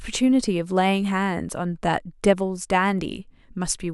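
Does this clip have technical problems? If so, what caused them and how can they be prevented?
Yes. A single sharp click at 1.73 s, likely dropped samples: a couple of samples go missing and the waveform jumps. Adequately sized, uninterrupted buffering prevents this.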